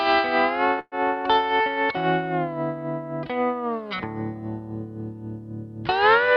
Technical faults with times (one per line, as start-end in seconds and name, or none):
0.79-0.95 call audio freeze